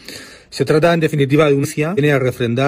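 Compressed frames skipped: whole frames never reached playback, so the audio leaps forward at 1.60–1.65 s, dropping roughly a second, and again at 1.94–1.99 s, dropping under half a second. These fit runs of 43 ms frames.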